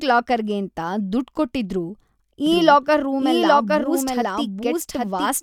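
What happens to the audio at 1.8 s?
Nothing goes wrong at 1.8 s; the speech runs on intact through that moment, with no dropout, click or other fault.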